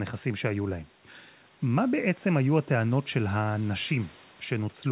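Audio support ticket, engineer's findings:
No faults found; the audio is band-limited to 4 kHz, as expected from the G.711 call path.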